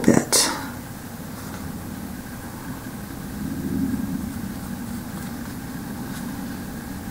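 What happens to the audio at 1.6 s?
Nothing goes wrong at 1.6 s; the audio carries on intact through that moment, with no dropout, click, distortion or other fault.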